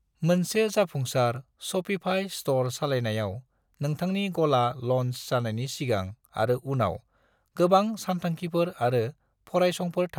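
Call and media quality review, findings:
No audible faults found in this speech recording.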